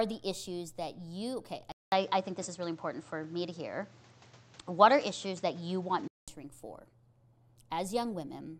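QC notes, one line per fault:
1.72–6.28 s, input switched to a poorer device: a 200 ms silence opens at 1.72 s, then the speech returns dull and boxy, with nothing above 8.2 kHz, a level step of about 5 dB and new background noise roughly 30 dB below the speech. It clears at 6.28 s. The likely cause is a swap to a narrower-band microphone. A spectrogram shows the top band cut off sharply for that span. The waveform shows a flat gap, then a step in amplitude.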